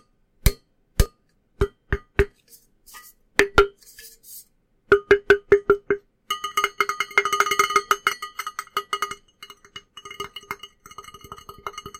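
A recording of sounds with two skips, at 1.06 s and 8.13 s, where the audio jumps ahead by about 10 ms with no silent gap, likely a dropped buffer (overrun).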